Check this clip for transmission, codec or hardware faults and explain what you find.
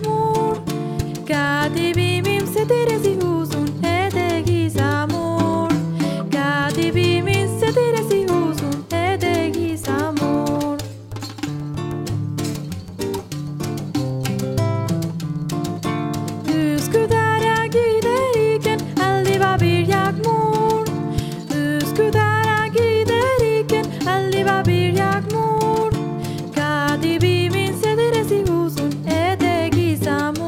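Nothing in the recording points to a transmission, codec or hardware problem, so there's nothing to flag here.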